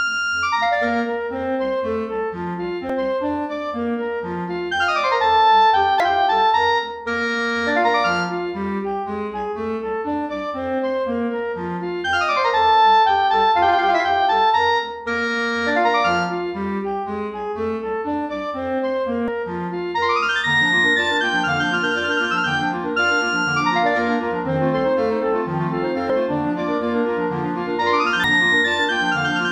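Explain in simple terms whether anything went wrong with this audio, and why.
Five brief glitches, at 2.90, 6.00, 19.28, 26.10 and 28.24 seconds, come from damaged data in a compressed stream. Some stored bytes were corrupted, so the decoder misread those frames and briefly lost its place in the audio before recovering.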